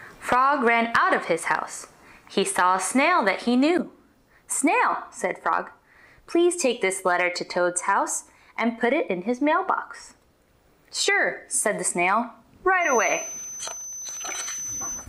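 From 12.79 s to the end at 15.08 s, a feedback whistle sits behind the sound: a thin, steady tone at 6.1 kHz, roughly 10 dB below the main signal, swelling and fading slowly in level. The likely cause is a loudspeaker-to-microphone loop running just at the edge of feedback, where the gain around the loop is high enough to sustain that single frequency but not high enough for it to build into a runaway howl.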